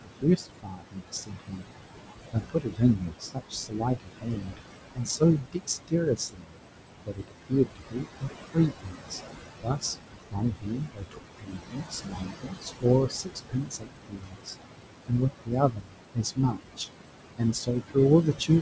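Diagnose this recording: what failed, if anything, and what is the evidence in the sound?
The call processing stage failed, specifically the noise suppressor. It shows noise suppressor artifacts throughout. The room noise is pulled down by about 20 dB between phrases and rises again under speech. On a spectrogram, the noise floor switches frame by frame, with speckled gaps below a band limit of 8 kHz, which fits a wideband call codec.

The noise suppressor also cut speech in the same stage. Speech dips by about 20 to 22 dB at 0.03–1.72 s, 2.32–4.58 s, 4.92–6.60 s, 7.06–9.20 s, 9.63–14.63 s, 15.08–16.88 s and from 17.38 s to the end. The worst stretch is around 9.6–14.6 s, with about three seconds affected. The suppressor takes soft consonants and endings for noise. On the waveform they appear as abruptly shrunken tails.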